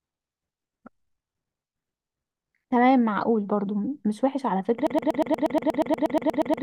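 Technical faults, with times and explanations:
4.87 s to end (6.62 s), broken-record loop: a fragment of speech about 0.12 s long repeats back to back roughly fifteen times until the clip stops, and the speech that should have followed is lost. The likely cause is a stalled player or stream that kept resending the last chunk it held. On a waveform, identical 119 ms blocks tile the end. A spectrogram shows one short pattern stamped repeatedly in a rigid, evenly spaced row.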